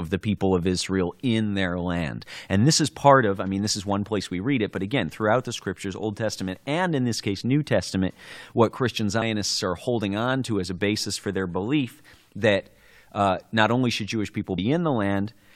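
At 9.21 s, just before "are holding on to", and again at 14.57 s, the speech is broken by a very short glitch. Each one is damaged data in a compressed stream: corrupted bytes make the decoder misread a frame and lose sync until it finds the next valid header. On a spectrogram each shows as a thin vertical disturbance, and in the waveform as a brief, jagged discontinuity.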